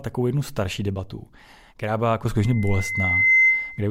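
At 2.38 s a loudspeaker feedback squeal begins: the microphone picks up its own loudspeaker, and the loop gain exceeds unity near 2.1 kHz. That single tone swells over about a second to roughly 10 dB above the speech and persists until 3.88 s.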